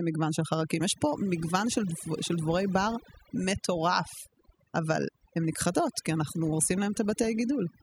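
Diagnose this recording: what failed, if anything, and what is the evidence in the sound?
Overdone noise removal in the processing stage runs through the whole speech clip. The background between phrases drops and breaks up into twinkling specks. The suppressor is cutting narrow bands it judges to be noise, and quieter voice detail goes with them.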